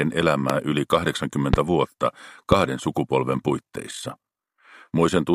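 Three loud pops come first, at 0.50 to 0.52 s, 1.54 to 1.56 s and 2.52 to 2.54 s. Each is a single sharp click that stands roughly 20 dB above the surrounding audio. The sound carries on beneath each one. They arrive about once a second. The likely cause is a sudden voltage pulse, from a switch, static or a driver glitch, added to the signal and briefly shaped by the circuits after it.

From 3.31 to 4.63 s there is overlap-add ripple. The audio was split into windowed frames and joined again with overlaps that do not add up to a steady gain. So the level swells and dips once per frame, by about 6 dB. That happens around fifty times a second. It is heard as a fast, buzzy flutter, a rough robotic tremolo riding on the sound.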